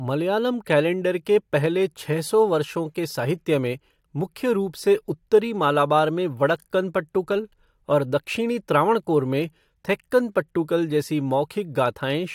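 No technical fault can be heard anywhere in the recording; the signal runs continuously, with nothing breaking into it.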